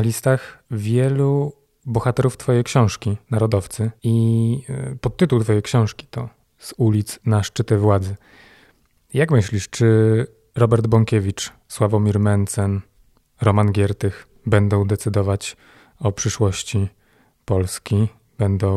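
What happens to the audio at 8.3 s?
Nothing goes wrong at 8.3 s: the speech runs through that moment intact, with no dropout, click or distortion to be heard.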